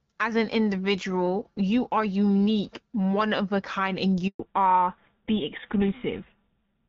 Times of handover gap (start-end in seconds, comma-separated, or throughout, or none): 4.27-4.39